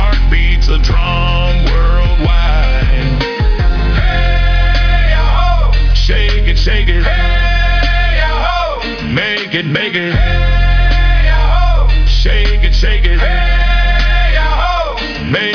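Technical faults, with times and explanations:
Nothing stood out as a problem on listening.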